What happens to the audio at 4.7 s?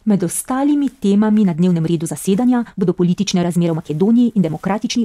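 At 4.7 s the speech is inside a time-stretched section that runs from 1.39 s to the end of the clip at 5.04 s. From 1.39 s the pace jumps abruptly to about 1.51 times normal speed, yet the pitch stays where it was. The sound turns rushed. The likely cause is software squeezing this stretch to fit a shorter length, holding the pitch by dropping short pieces of audio.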